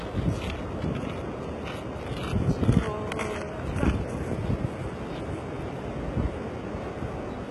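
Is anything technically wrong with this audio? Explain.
Yes. Throughout, the treble sounds gritty and metallic and stops at about 11.7 kHz, likely HE-AAC compression at a very low bitrate near 16 kbps. Unlike a plain low-pass, the upper band stays bright but is rebuilt from copied lower bands, so it doesn't match the original.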